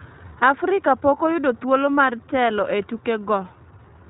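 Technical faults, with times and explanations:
Throughout, iLBC codec: the speech is band-limited to below 4 kHz and has a plainly audible rough, synthetic edge. Each 20 ms frame's excitation is coded independently of the previous one, and the coarseness fits the 15.2 kbps mode.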